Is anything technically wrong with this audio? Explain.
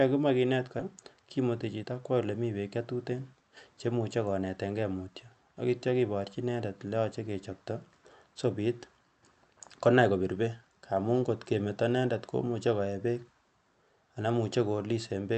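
Yes, two faults sit right at the start of this speech clip.

At about 0.79 to 0.81 s there's a skip ahead. Roughly 400 ms of audio never gets played. It was either lost in transit or thrown out when the jitter buffer overflowed while newer audio was already queued. Playback jumps straight to that later audio with essentially no gap, so the sound on either side is butted together and a chunk just vanishes mid-flow.

Right after, from about 0.89 to 1.85 s, comes a jitter buffer speed-up. The buffer was still holding more than it wanted, so the receiver kept snipping out tiny pieces, a pitch period or so at a time, to drain it. In total that's roughly a tenth of a second. The speech runs at about 110% speed with the pitch unchanged, so that second sounds slightly rushed. The call path itself sounds like Opus at around 48 kbps, with the top end stopping near 8 kHz.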